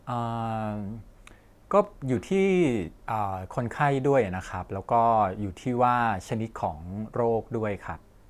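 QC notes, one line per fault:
No fault found.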